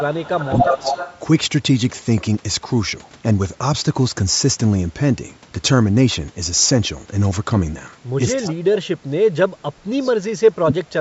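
From the start to 0.69 s the voice dips by as much as about 25 dB and thins out in patches. This is likely speech suppressed in double talk: with both ends talking at once, the echo canceller could not separate this talker from the loudspeaker echo and turned the whole signal down. It is ducked and loses its top.

Overlapping that, from 0.46 to 1.19 s, a delayed copy of the voice sits about 238 ms behind the original and at roughly the same level. This is likely an echo leak: the far end's loudspeaker sound reached its microphone, its canceller left part of it in, and it came back. It differs from room reverberation because it is a distinct, separate repeat at a fixed delay, not a smooth decaying tail.

At 1.85 s there is a single sharp click, likely dropped samples, where a tiny fraction of a millisecond of the waveform went missing and the signal jumped straight to a later value. Nothing audible is lost. 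Unlike a dropout or gap, it is a thin vertical line across the spectrum with no silence.

From 8.38 s to the end, double-talk suppression returns, cutting the voice by up to about 35 dB over roughly two seconds in total. A faint 238 ms echo leaks through from 8.47 to 8.54 s, about 20 dB below the speech. A second dropped-sample click falls at 10.15 s.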